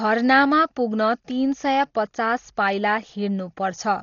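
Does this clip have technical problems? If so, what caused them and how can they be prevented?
Yes. Throughout, the speech sounds dull with nothing above 7 kHz and rough, fluttering noise, likely Dolby Digital compression at a starved bitrate, around 32 kbps. Encode at a higher bitrate to prevent it.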